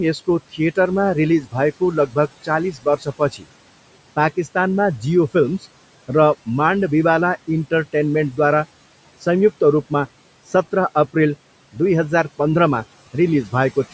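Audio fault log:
Throughout, noise suppressor artifacts: the steady room noise, about 20 dB below the speech, is pushed down by about 18 dB between phrases and rises again under them. A spectrogram shows a patchy, speckled noise floor that darkens in pauses.
1.41–1.55 s, 1.80–2.49 s, 2.72–3.46 s, speech cut by the noise suppressor: quiet speech was mistaken for noise and lowered by about 13, 14 and 18 dB, sounding swallowed. The waveform shows brief sharp dips, and the spectrogram shows faded speech energy.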